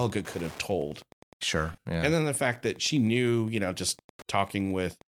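Speech carries a steady tick about ten times a second throughout, spaced at 102.4 ms and sitting roughly 25 dB below the talker. This is Wi-Fi interference: a nearby radio's beacon is being rectified in the audio circuitry. The slow, even tick rate tells it apart from GSM buzz, which is a dense, rough burst pattern near 217 Hz rather than discrete clicks. From 1.73 s to 1.85 s there is a patch of lost LE Audio frames. About 98 ms of audio goes missing, scattered across 120 ms, with the longest gap roughly 70 ms. That total fits around thirteen 7.5 ms LC3 frames. The decoder covers each hole by repeating the last spectrum with randomised phase, so the sound turns into a hissy, smeared wash that fades during the longer run. A plain dropout would instead cut hard to silence or a click. The light lossy coding on the stream leaves only faint traces and cannot be pinned to a specific codec.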